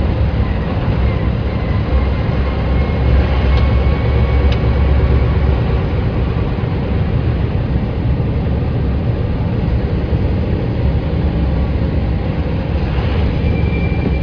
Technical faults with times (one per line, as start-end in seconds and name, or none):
none